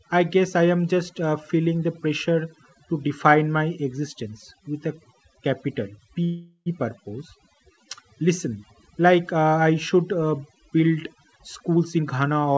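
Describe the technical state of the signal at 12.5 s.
Jitter buffer speed-up runs from 11.36 s, just after "I should uh build", to the end at 12.58 s. The receiver trims pitch-period slices, about a third of a second in total, so speech plays at 126% speed and the same pitch, sounding hurried. Overdone noise removal is also present here and throughout: bands near the estimated noise are pushed far down, leaving a lowered, twinkling background.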